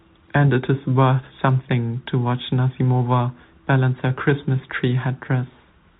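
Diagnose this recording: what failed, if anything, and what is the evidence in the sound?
Nothing failed: the speech carries the expected telephone-band character of a G.711 A-law path at 64 kbps, with nothing above 4 kHz and only faint quantisation noise tracking the level, and there are no dropouts, clicks, level jumps or timing breaks to point to any stage.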